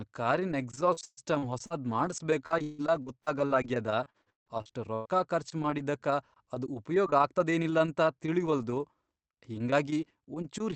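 From 0.75 to 5.09 s, before "ಖರ್ಚ್ ಮಾಡಿದ್ದಕ್ಕ ಅದ್ ಉಪಯೋಗ್", speech turns choppy and robotic: repeated packet loss, each gap up to 159 ms patched by continuing the previous sound.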